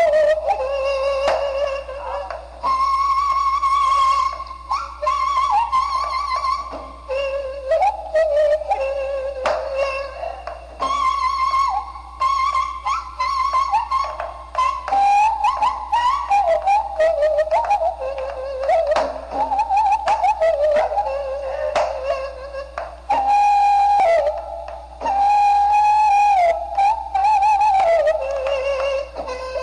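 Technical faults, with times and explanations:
Nothing stood out on listening, and there is no technical fault to report.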